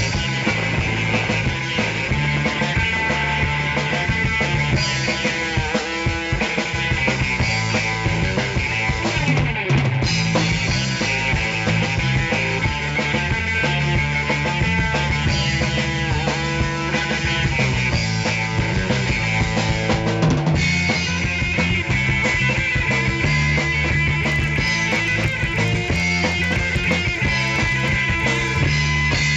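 From 24.2 to 28.6 s, a resampler restarted on every block breaks the conversion from 16 kHz to 48 kHz. Each 40 ms block is converted in isolation, leaving a small error at every block edge. The result is a steady 25 Hz ticking buzz laid over the sound.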